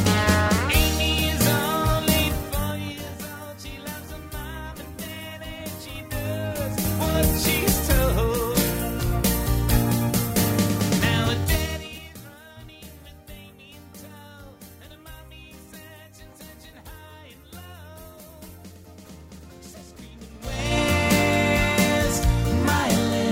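From 5.80 to 7.17 s the level shifts by something like 15 dB in 3 dB jumps instead of a continuous ramp, producing zipper noise. Each jump lands as a small click, and at around three per second they form a slow ticking that rides on the sound only while the level is moving.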